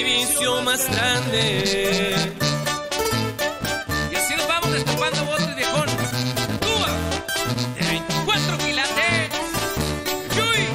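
A filter restarted on every block runs through the whole sound. Each block begins with a small transient, giving a 375 Hz buzz that follows the level. This fits a 128-sample block.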